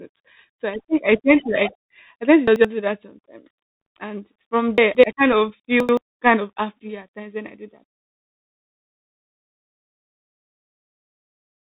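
The whole clip of speech runs through a Bluetooth CVSD headset codec, and the damage is plainly audible. CVSD sends one bit per sample at 64 kbps, stepping the waveform up or down with an adaptive step. Nothing above 4 kHz survives. Loud bright sounds outrun the step and distort. S sounds turn scratchy. A fine granular hiss sits under everything.

At 2.48 to 2.65 s, chunks play out of order, between "I tend to" and "do that sometimes". An 85 ms chunk arrives one chunk late and plays after its successor. Nothing is missing, but the sequence is wrong. There are three hard joins, and the moment sounds jumbled.

From 3.81 to 3.86 s there is unconcealed Bluetooth headset packet loss. About 49 ms of audio is gone, which points to a run of roughly fifteen short headset packets dropped. Nothing fills the gap. The sound stops dead, with abrupt edges. On this CVSD link it comes back briefly quieter.

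At 4.78 to 5.04 s, chunks are out of order again, just before "I kind of". This time an 85 ms chunk lands two chunks late. The displaced piece plays after two later ones. The joins are hard and the passage is scrambled.

At 5.80 to 5.97 s, between "I kind of" and "kind of happy at", a third reordering occurs. One 85 ms chunk is one chunk late. The result is another brief garbled jump with hard joins.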